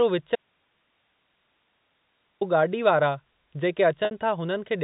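A speech recording in which the signal path likely lost its input for about 2.06 s while staying live, an audio dropout to a faint residue: from 0.35 s to 2.41 s the speech cuts out abruptly, leaving only faint hiss far below its normal level. Later, 60 ms of data went missing, which fits two lost packets, and the receiver bridged it with packet loss with pitch repetition, so at 4.05 s the sound briefly holds as a slightly buzzy, repeated tone before resuming. The telephone-band limit, with nothing above 4 kHz, reflects the G.711 mu-law coding.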